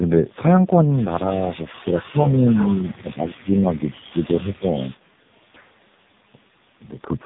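From start to finish the speech is carried by the AMR narrowband mobile codec, damaged heavily enough that the voice sounds buzzy and synthetic, which fits its low 5.15 kbps mode. A spectrogram shows a hard ceiling at 3.8 kHz with nothing above it, and smeared, blocky harmonics below.

Between 1.35 and 2.76 s, 3.01 and 3.95 s, and 4.12 and 4.69 s the voice repeatedly sinks, by about 15 dB at its deepest, and loses pieces. In total this covers around a second in the first stretch, well under a second in the second and under half a second in the third. This is likely speech suppressed in double talk, where an echo canceller could not separate the talker from the loudspeaker echo and turned both down. The waveform shows ragged troughs in the envelope.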